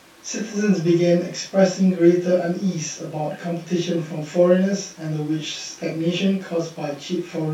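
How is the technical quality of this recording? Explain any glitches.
No glitches turn up here, so there's nothing that needs explaining in this recording.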